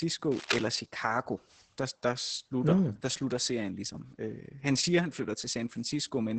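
Across the whole speech clip the audio carries heavy Opus voice compression. The coding sounds like the SILK linear-prediction mode at a low rate, which fits a bitrate around 10 kbps in wideband. Nothing is present above 8.7 kHz, so sibilants and breath lose their top end. The coarsely quantised excitation leaves the voice muffled, hoarse and slightly robotic, with the smeared, buzzy texture typical of a predictor starved of bits.

From 0.31 to 0.66 s a burst of cable scratch noise sits over the speech. It is dense and irregular, heard as a brief scratching rustle only a few dB below the speech, so it is clearly audible rather than buried. The likely cause is a worn cable, connector or control being disturbed, with its contact resistance jumping rapidly and injecting uneven bursts of noise into the signal.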